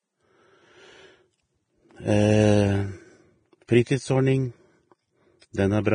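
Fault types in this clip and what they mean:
Vorbis compression: The speech sounds hissy and grainy across the whole clip, with roughened tones and softened onsets. Nothing is heard above 9.7 kHz, so the treble is cut off. Within the remaining highs, fine detail has turned into noise of similar energy. This points to heavy damage from a likely Vorbis encode at a low bitrate, roughly 23 kbps. Such an encoder keeps only a smooth spectral outline and coarsely quantised detail.
pre-echo: A brief hiss arrives just before a sharp attack, and the attack itself sounds soft and smeared. It occurs from 3.84 to 3.87 s, lasting 31 ms, and again at 5.53 s, lasting 18 ms. The codec spreads its quantisation noise evenly across each block. When a sudden loud onset falls late in a block, noise sized for that loud part leaks into the quiet moment before it.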